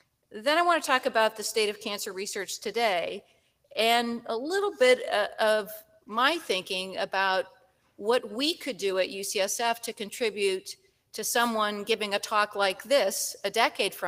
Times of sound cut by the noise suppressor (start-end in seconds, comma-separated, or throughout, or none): 3.22-3.72, 5.82-6.07, 7.54-7.99, 10.76-11.08